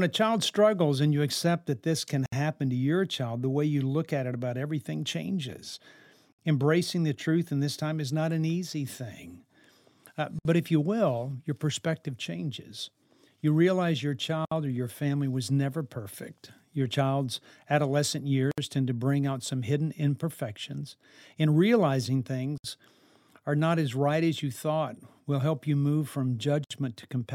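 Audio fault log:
2.26, 6.32, 10.39, 14.45, 18.51, 22.58 and 26.64 s: gap at a join of encoded pieces. A silence of about 64 ms cuts into the speech every 4.0 s, for instance right after "child's adolescent", then the speech resumes exactly where it stopped. The regular spacing suggests 4-second pieces encoded separately and butted together untrimmed, so each join keeps one run's start-up delay plus the previous run's end padding. The edges are smeared by the codec.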